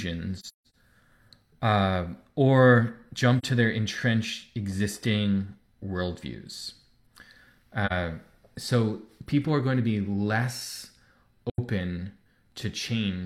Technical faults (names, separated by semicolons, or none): AAC frame loss with muting